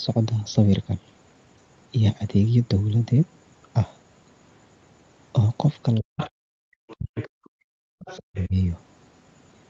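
Residual echo likely escaping the canceller lets the other side's voice leak through, faint, at about 15 dB below the talker from 5.95 to 6.28 s and about 20 dB below from 6.88 to 7.48 s and 8.0 to 8.45 s. Meanwhile, speech is suppressed in double talk, likely because the canceller mistook the talker for echo. The voice drops by up to about 40 dB from 6.0 to 6.48 s, 6.94 to 7.46 s and 8.26 to 8.54 s. The echo canceller also gated the background from 7.74 to 7.98 s, so the room sound falls away by about 36 dB for a moment before returning.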